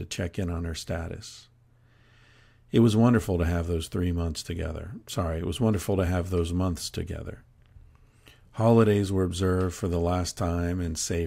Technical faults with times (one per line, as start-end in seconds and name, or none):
none